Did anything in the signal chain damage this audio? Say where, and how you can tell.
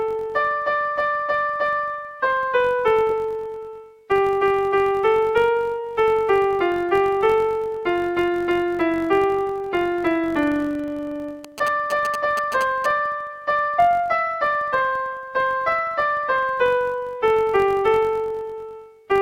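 Yes. A filter restarted on every block in the buffer stage leaves a 46.9 Hz tick-buzz throughout. Each block starts from silence, which fits a 1024-sample block.

GSM signalling bursts enter the analogue wiring from 11.4 to 12.9 s. The galloping 217 Hz buzz, about 10 dB below the signal, is rectified radio.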